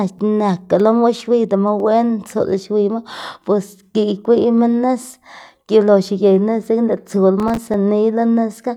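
A tiny piece of the sample stream, likely a fraction of a millisecond, goes missing at 0.80 s and again at 1.80 s. These are dropped samples: the waveform leaps straight from one value to a later one with nothing in between. The loss is far too brief to take anything out of the speech, so each instance is heard only as a single sharp click, a thin vertical line across the spectrum.

From 7.40 s to 7.74 s, the processor falls behind and misses the deadlines for a run of short audio buffers, each only a few milliseconds long, around ten of them in all. This is processor overload crackle. Every missed buffer is filled with silence, leaving a small gap with hard edges in the speech. Packed together, these gaps produce a gritty burst of crackle over that third of a second, which stops when the processing load eases.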